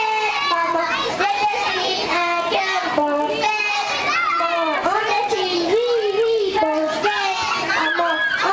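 Throughout the clip, the resampler restarted on every block. Each 20 ms block was converted without its neighbours' samples, leaving a small error at every edge, which fits a 48 kHz to 16 kHz conversion. The result is a 50 Hz buzz riding on the signal.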